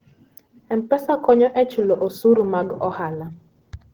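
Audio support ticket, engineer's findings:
Speech hoarse, grainy and muffled throughout. Likely Opus compression in hybrid speech mode, with low band waveform-coded and upper bands noise-filled, fitting roughly 16 kbps. Spectrogram shows a smeared, noisy upper region with few holes and content up to about 20.2 kHz.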